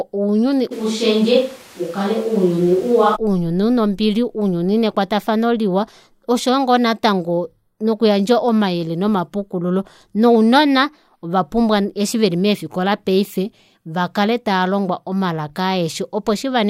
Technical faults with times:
0.73-3.14 switch to a distant microphone

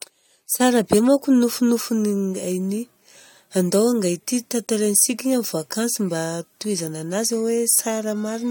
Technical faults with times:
none

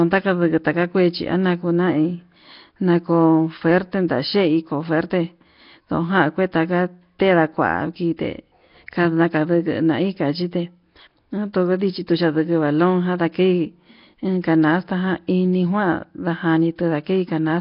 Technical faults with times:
0.00-17.61 Nellymoser compression

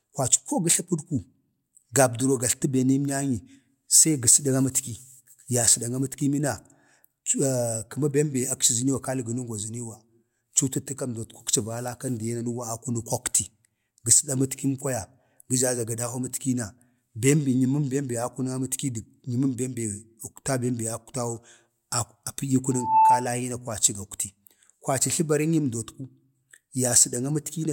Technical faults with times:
22.71-23.30 loudspeaker feedback squeal

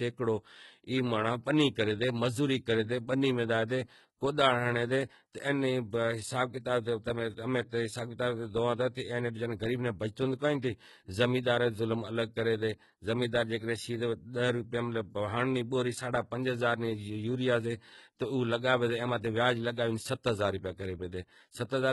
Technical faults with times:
0.00-21.92 HE-AAC compression

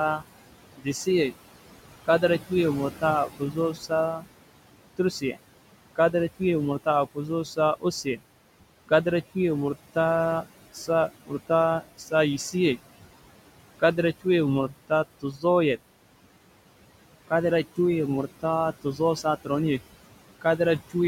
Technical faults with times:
0.00-21.07 noise suppressor artifacts
0.19-12.79 speech cut by the noise suppressor
13.80-15.78 speech cut by the noise suppressor
17.28-19.48 speech cut by the noise suppressor
20.41-20.95 speech cut by the noise suppressor

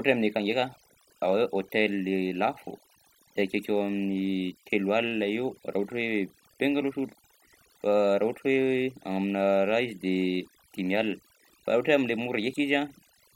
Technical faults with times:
0.00-13.35 overdone noise removal

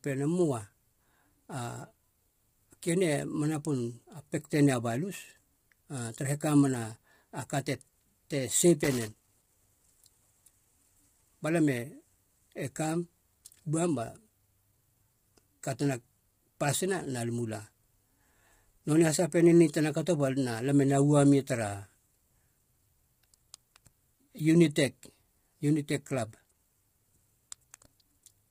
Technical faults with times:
0.00-28.50 low-delay AAC compression
8.84-9.54 loose connector crackle
26.35-26.61 loose connector crackle

